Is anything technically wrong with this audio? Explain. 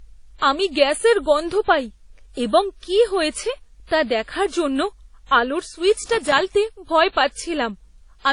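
Yes, there are two faults.

Transcoding between lossy codecs runs throughout the speech. Nothing is heard above 10.5 kHz, and two different kinds of artefact are heard together. This is likely one low-bitrate codec feeding another, such as WMA into HE-AAC, with the second codec spending bits on the first codec's artefacts and adding its own.

Loose connector crackle occurs from 5.99 to 6.41 s. A worn or dirty contact repeatedly made and broke the signal path, chopping the audio. It sounds like a short, irregular burst of scratchy crackle.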